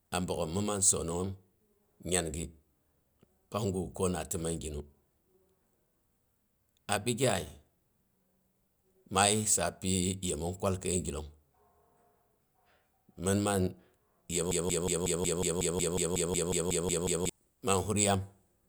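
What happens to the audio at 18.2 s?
Nothing goes wrong at 18.2 s: the audio runs through that moment intact, with no dropout, click or distortion.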